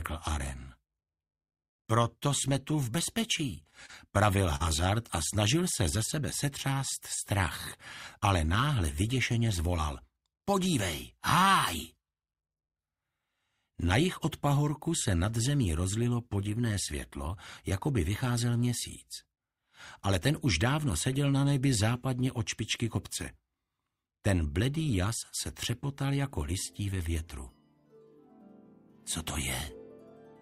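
Late-arriving packets kept draining the jitter buffer from 3.63 to 4.62 s, causing repeated stalls (stutter): seven brief hold-overs of the last sound, the longest 43 ms, making the audio drag and hiccup.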